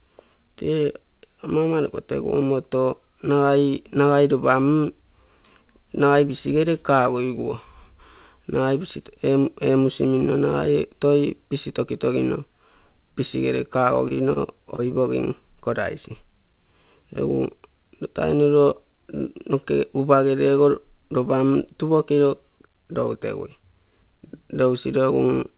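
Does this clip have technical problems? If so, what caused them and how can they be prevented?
Yes. At 14.08 to 14.12 s and 14.76 to 14.80 s, brief smears replace about 20 ms of speech. This is short concealed packet loss: the receiver continued the last sound to cover each missing packet. Stronger network paths or forward error correction would prevent these gaps.

At 14.14 to 14.19 s and 14.33 to 14.38 s, a sound is held slightly too long. These are short stalls from a late packet: the jitter buffer ran dry, so the decoder stretched audio for about 30 ms and 28 ms until the packet arrived. A deeper or adaptive jitter buffer would absorb these delays.

The call path itself carries nothing above 4 kHz, which fits G.711 mu-law coding.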